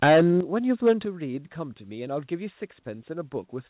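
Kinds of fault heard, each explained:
Microphone overload: The opening syllables from 0.02 to 0.28 s have a harsh, crackling edge, and the peaks near 0.86 to 0.92 s sound gritty too. The likely cause is input level pushed about 10 dB, then about 5 dB, past the converter's limit, flattening the waveform tops.
Microphone volume stepped down: The voice and background fall abruptly, by about 4 dB at 0.04 s and about 7 dB at 1.05 s. This is likely the call software reacting to clipping by cutting the device's input volume in a single step.
Sudden gain jump: At 0.41 s the speech and its background noise drop together by about 8 dB and stay lower to the end, with no gradual fade. It likely comes from a digital gain change applied instantly between samples rather than ramped.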